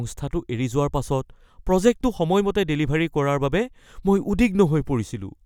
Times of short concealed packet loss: none

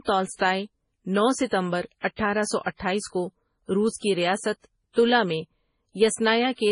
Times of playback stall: none

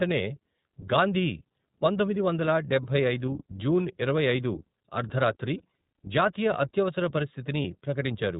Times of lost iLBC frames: 3.26-3.28, 5.58-5.61, 7.62-7.65

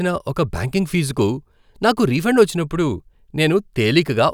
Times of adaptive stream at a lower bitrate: none

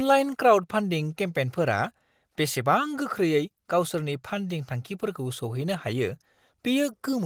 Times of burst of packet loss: none

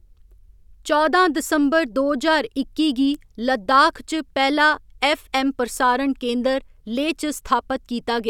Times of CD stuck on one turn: none

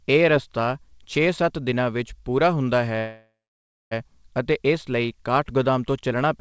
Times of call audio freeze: 2.98-3.93

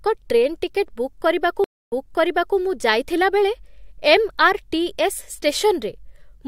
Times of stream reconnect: 1.64-2.57

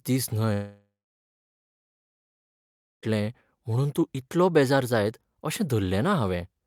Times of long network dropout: 0.53-3.05

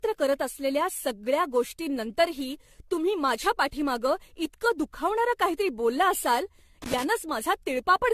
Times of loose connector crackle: 6.82-7.04

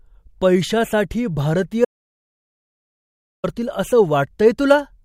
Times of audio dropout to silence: 1.85-3.44

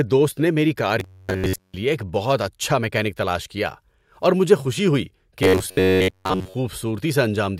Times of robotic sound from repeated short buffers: 1.00-1.74, 5.43-6.54

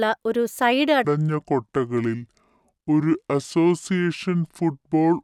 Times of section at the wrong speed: 1.05-5.23

